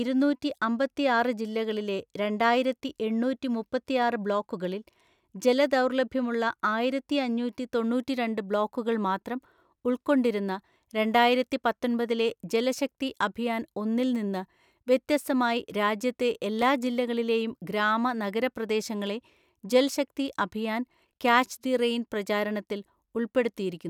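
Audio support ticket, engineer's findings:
CD scratch ticks, 16.20 to 16.83 s, speech. Four short ticks, each a couple of milliseconds at most, roughly six a second. Probable component: disc surface and player error correction. A blemish exceeds correction once per revolution. The player interpolates or mutes the lost samples, leaving brief regular clicks.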